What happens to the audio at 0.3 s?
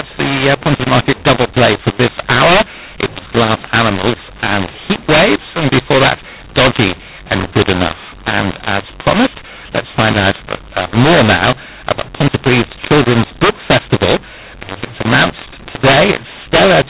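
A mu-law and A-law mix-up is present at 0.3 s and runs throughout the clip. The telephone speech was written as A-law but read back as mu-law, so sample levels are scrambled and the quietest values are lifted well above silence. The speech sounds harsh and distorted, with noise filling the pauses.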